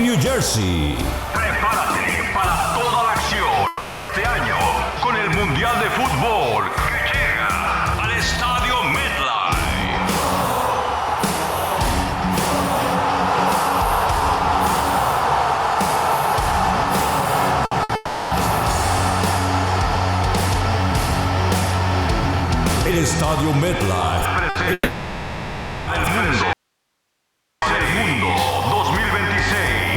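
First hiccup is at 3.67 to 4.12 s. The audio stops and what's left is the last sound smeared on as a buzzy hiss that fades away over about 0.42 s, then the clip picks up further along with that chunk simply gone. That's the signature of a long network dropout, most likely packets not arriving and the receiver papering over the hole by stretching what it last had.

Around 17.7 s things get choppy. There are two short bursts of packet loss, at 17.65 to 17.74 s and 17.83 to 17.92 s, each about 60 ms. You hear a quick held, fading smear where the missing bit should be, then a jump ahead. Right after, at 17.95 to 18.34 s, comes another long network dropout of about 0.36 s, again filled with concealment that decays rather than with silence.

The same pattern repeats later. There's one more 60 ms burst at 24.49 to 24.58 s, then the longest dropout, 24.73 to 25.90 s. Over that 1.14 s the concealment fades right out, leaving a brief moment of near silence before the audio returns past the lost section.

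Last, at 26.53 to 27.62 s, the signal abruptly vanishes for about 1.1 s and comes back just as suddenly. The gap isn't silent. It holds only faint hiss, roughly 55 dB below the normal level. That's an audio dropout to a faint residue: the wanted signal was likely cut, but the path downstream stayed live, so you're hearing its noise floor instead of a clean pause or fade.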